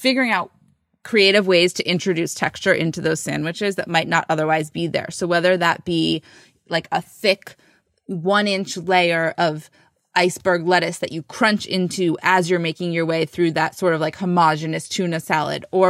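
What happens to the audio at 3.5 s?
At 3.5 s you're inside a stretch of sample clock jitter running from 2.89 to 5.44 s. The converter's timing wanders by something under a microsecond, so each sample lands a touch early or late, and the error scales with how steeply the waveform is moving. You hear it as a fine hiss or grittiness riding on the speech, sitting roughly 45 dB down, strongest on loud, bright sounds and gone in the pauses.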